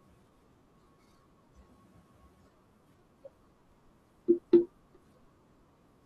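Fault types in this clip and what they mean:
Periodic USB or driver dropouts: something in the background keeps stalling the USB bus or audio driver on a fixed cycle, and each time a few milliseconds of sound just get skipped, around 4 ms or so. In this speech you hear them from about 3.72 s to 5.70 s as a handful of evenly spaced ticks, one roughly every 0.496 s, about five in all, riding on the speech as it goes.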